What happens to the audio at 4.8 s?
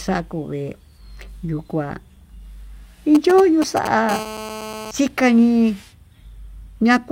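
GSM phone buzz, 4.11 to 4.91 s: a nearby phone's 217 Hz transmit bursts, rectified by the audio circuit, make a steady, raspy buzz under the speech.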